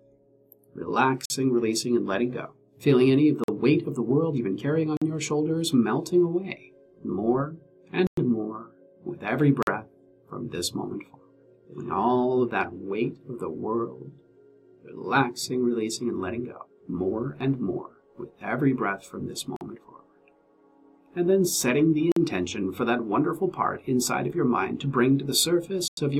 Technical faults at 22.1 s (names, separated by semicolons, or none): block of digital silence